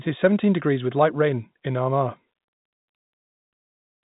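The speech carries no technical faults, and its band-limited sound, with nothing above 3.8 kHz, fits ordinary G.711 telephone coding.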